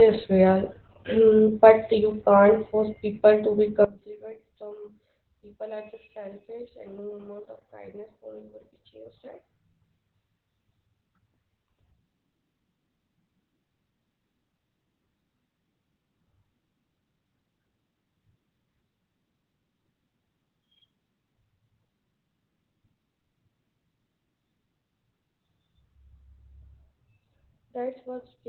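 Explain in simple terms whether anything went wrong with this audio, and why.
A couple of things went wrong here. The whole clip has heavy Opus voice compression. It was squeezed through a low-rate speech coder that throws away everything above roughly 4.4 kHz, so the speech sounds muffled, like an old phone line. The coder also rebuilds the voice from a rough sketch in 20 ms chunks, which is where the hoarse, slightly robotic, grainy quality comes from. It's heavy damage, and it's there from start to finish.

The second problem starts at about 3.84 s, right after "force people to be", and runs to the end. The voice suddenly drops away to a faint ghost of itself. That's the classic sign of one channel inverted. One side of the stereo pair is likely flipped upside down, so when the two sides get combined into mono, the voice, which is identical in both, cancels itself out and leaves only the small differences between the channels.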